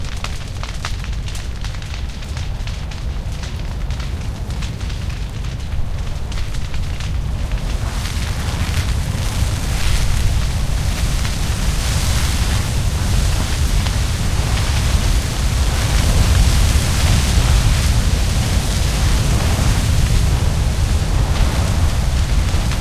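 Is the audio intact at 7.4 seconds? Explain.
Yes, at 7.4 seconds the audio is intact, with no dropout, click, distortion or other fault to be heard at that moment.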